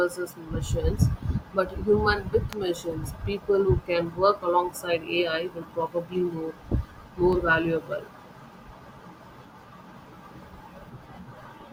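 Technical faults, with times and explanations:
2.53 s and 7.33 s: electrical switching spike. Two sharp snaps sit over the speech, the first much louder. A nearby switch arcing into the line is the likely cause.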